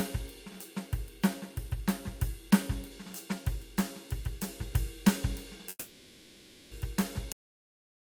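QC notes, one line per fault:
5.69–6.73 s, long network dropout: the music gives way to a decaying buzz that stretches the last sound for about a second, then about 30 ms of silence before playback resumes further on. The likely cause is lost packets hidden by concealment. On a spectrogram, smeared repeated bands fading out, then a gap.
7.32 s, cut-off end: the music stops mid-sound and drops straight to digital silence with no decay, as the final buffers were never written out. The waveform shows a sharp vertical edge into a flat line, and the spectrogram goes abruptly blank from there.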